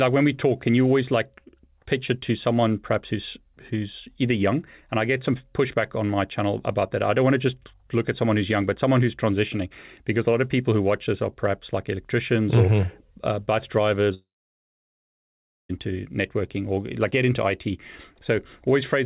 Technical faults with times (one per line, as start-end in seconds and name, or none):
14.14-15.71 long network dropout